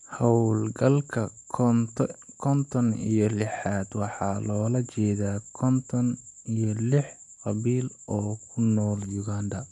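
The speech recording has no audible technical faults at any point.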